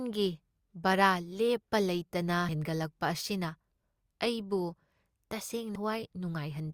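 At 5.75 s the speech jumps forward by roughly a fifth of a second: compressed frames skipped. Several whole frames, about seven at 26.1 ms each, were dropped or rejected by the decoder, and the overlapping neighbours join as a short smeared blip, not a click.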